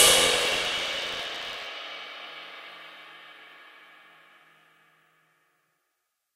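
From the start to 1.66 s there is buffer tearing: a steady robotic rattle at about 86.1 Hz riding on the everyday sound, which fits a 512-sample buffer. The write and read positions in the ring buffer have drifted until they cross within each period, so roughly a tenth of every buffer replays audio from around 40 ms earlier. The hard joins at both edges of that stale slice repeat once per buffer, producing the buzz.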